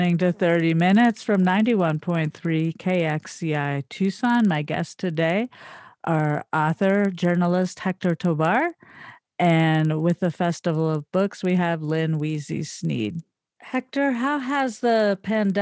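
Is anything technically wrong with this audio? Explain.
Yes. Throughout the speech there is a steady ticking at 20 Hz, fast enough to merge into a rough buzz that rides on the signal and drops away in pauses. This comes from a resampler restarted on every block during the conversion from 48 kHz to 16 kHz. Each 50 ms block was converted in isolation, so its filter lacked the true neighbouring samples at both edges, leaving a small error at every block boundary, twenty times per second.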